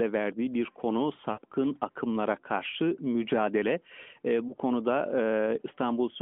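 Speech carried over a narrowband phone line, band-limited to about 200 Hz to 3.4 kHz with only light codec colouring, which fits the 12.2 kbps AMR-NB mode. At 1.32 to 1.40 s, between "verdiği bir konu" and "akımlara karşı mücadele", the sound smears into a drawn-out, fading buzz, and a shorter dip and warble follows at 4.48 to 4.56 s. These are lost AMR speech frames. Corrupted frames were concealed by repeating the last good pitch and spectral settings at falling gain. The first gap spans about 60 ms, which points to three lost 20 ms frames. The second points to a single lost frame.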